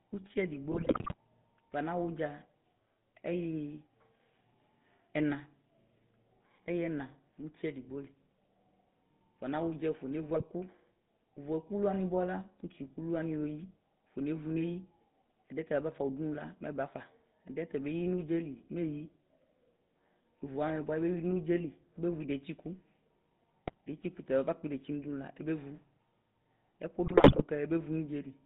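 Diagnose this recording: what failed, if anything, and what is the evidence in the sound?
The codec stage is the weak point: the speech passed through a GSM full-rate codec, whose sound fits its 13 kbit/s rate. The band runs from 150 Hz to 3.7 kHz, and the pulse-driven vocal-tract model leaves a plainly audible buzzy, gravelly roughness over the whole clip.

On the network side, GSM bit errors corrupted the decoder's filter, pitch and gain values, bending the spectrum and throwing the level frame by frame. The speech breaks into squawks, pops and gargling at 0.72–1.14 s, 10.34–10.47 s, 23.66–23.74 s and 27.04–27.43 s.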